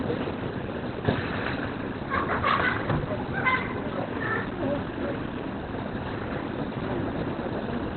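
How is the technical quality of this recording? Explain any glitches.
The quality is poor throughout. The audio sounds muffled and hoarse from start to finish, with nothing above 4.3 kHz and a heavily degraded, rough texture. This is likely Opus compression in its narrowband SILK speech mode, at a bitrate low enough to fit roughly 12 kbps.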